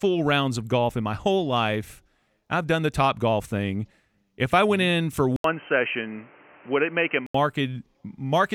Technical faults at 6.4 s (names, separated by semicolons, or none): input switched to a poorer device